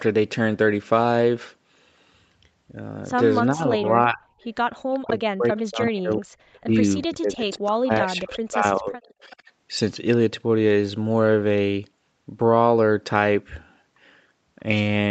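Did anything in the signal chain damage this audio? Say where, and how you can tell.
Yes. In the call processing stage, the speech suppressed in double talk is audible at 3.52–4.21 s, 5.07–6.75 s and 7.07–9.35 s. The level dips, by as much as about 40 dB, and recovers unevenly. The likely cause is an echo canceller clamping down while both ends spoke. Packet-loss dropouts would instead be abrupt, clicky gaps.

Echo leak, also in the call processing stage, brings back faint delayed copies of the sound at 4.41–4.47 s, 4.93–4.99 s and 5.51–6.17 s. They trail by roughly 380–390 ms and sit well below the speech, loudest in the last stretch. That fixed, long delay likely points to a far-end loudspeaker echo slipping past its canceller, not room reverberation.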